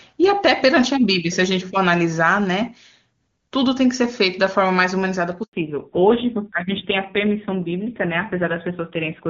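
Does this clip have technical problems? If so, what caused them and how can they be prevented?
Yes. A network handover gap at 5.43 s interrupted the call for 100 ms, so the speech drops to silence until 5.53 s and that stretch is lost. Keeping the handset on one cell, or using a network with seamless handover, prevents this.

A fallback to narrowband follows at 5.53 s: the call leaves HD Voice, and nothing above 4 kHz remains through the end, so speech turns dull and rough, which fits a low narrowband AMR rate. Ensuring both networks support HD Voice end to end prevents the downgrade.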